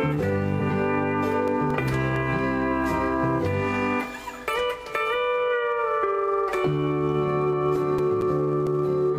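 At 0.56 to 0.62 s there's a short glitch from damaged data in a compressed stream. A stretch of corrupted bytes makes the decoder misread the frames, drop sync and hunt for the next good header. It happens again, briefly, at 4.51 to 4.56 s.

From 1.25 to 3.07 s you get nine regular ticks, about five a second. That's CD scratch ticks: a blemish hits once per disc turn, the error correction can't rebuild the loss, and the player patches over a few milliseconds. Six more, up to about 10 ms, run from 7.53 to 8.67 s.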